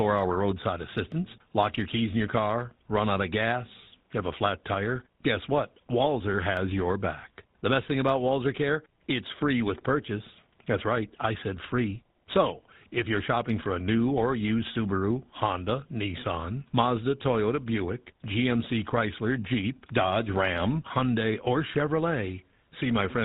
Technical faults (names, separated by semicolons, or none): GSM full-rate codec